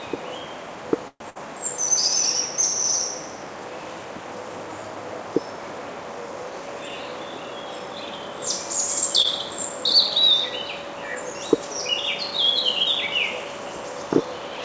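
At 1.08 s the sound stops moving forward for about 123 ms, until 1.24 s. The last moment is stretched into a fading buzz that drops to silence for roughly 60 ms before the audio picks up exactly where it left off. This is a call audio freeze, likely caused by packets stalling in transit until the jitter buffer ran dry. It differs from a loss because nothing is skipped. The sound resumes intact, only later.

Almost immediately afterwards, from 1.30 to 1.37 s, comes a burst of packet loss. About 58 ms of concealment fills the gap as a held, decaying continuation of the preceding sound, and when real audio returns it has jumped ahead by about 60 ms. Unlike the freeze just before it, the material in between never arrives. The events resume further along rather than from where they broke off.

Between 6.44 and 6.90 s the jitter buffer speed-up trims its backlog. Short slices about one pitch period long are cut out repeatedly, removing about 50 ms in total, so this stretch plays at about 110% speed. 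The result is a hurried, slightly compressed feel with no change in pitch. That is what separates it from a loss: there is no smear, tick or gap, just time quietly taken out.

At 9.22 s a short concealed packet loss covers about 20 ms. The decoder extrapolates from the last sound and then crossfades back into the real signal, which is heard as a tiny smear or wobble. It is far briefer than the 1.30 s burst, so it registers as a blip rather than a dropout.

Throughout, the G.722 call path caps the bandwidth, and nothing above 8 kHz is present.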